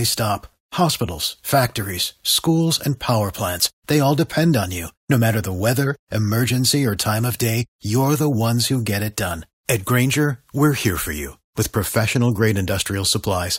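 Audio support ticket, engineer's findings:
No audible faults found in the speech recording; no component implicated and no action required.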